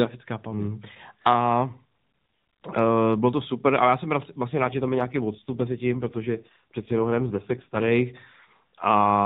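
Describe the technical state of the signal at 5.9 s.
At 5.9 s you're in the middle of an AMR rate drop that runs from about 4.50 to 7.92 s, starting right after "super ale já jsem". The link has pushed the mobile codec down to a much leaner mode, which sounds like 12.2 kbps falling to roughly 4.75 kbps, so fewer bits describe each 20 ms frame. The band stays the same narrowband cut at 4 kHz and there's no gap, but the speech turns buzzier and more synthetic until it recovers.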